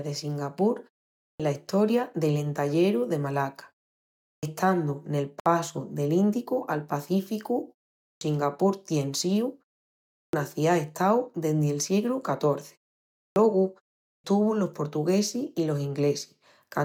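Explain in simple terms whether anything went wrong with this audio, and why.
The playback device keeps dozing off in the short silences and needs a moment to wake up. This is a clipped start after a pause: at 1.22, 4.24, 8.03, 10.16, 13.2 and 14.05 s, the first 160 to 190 milliseconds of speech vanish, so the speech begins abruptly, as in "la estoria del" at 1.22 s.

The recording was also encoded in separate pieces and glued back together untrimmed, leaving a gap at a join of encoded pieces. At 5.40 s the sound drops out for about 61 milliseconds, then carries on with "del ïndicu al".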